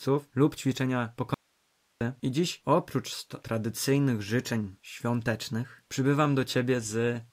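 At 1.34 s the speech cuts out abruptly and returns just as sharply at 2.01 s, an audio dropout to a faint residue lasting about 0.67 s. The gap holds only a low hiss, roughly 45 dB below the speech, so the chain after the break likely stayed live while the source signal was lost. On a waveform the envelope collapses to a thin flat band; a spectrogram shows a hard-edged gap filled with faint broadband noise.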